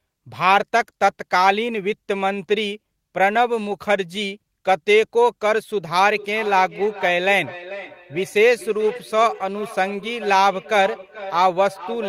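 Speech with feedback echo between two devices from 6.06 s to the end: repeats roughly every 400 ms, about 15 dB down, thinning and ringing, showing on a spectrogram as stacked, fading copies of each word.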